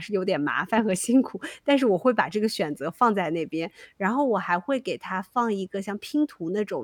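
No technical faults can be heard anywhere in this speech recording. There is nothing that breaks from how the signal should sound, so there is no event to place in time.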